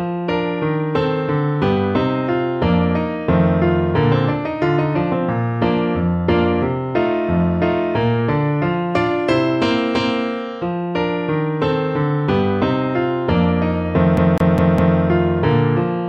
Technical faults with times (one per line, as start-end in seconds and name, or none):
14.17-14.99 CD stuck on one turn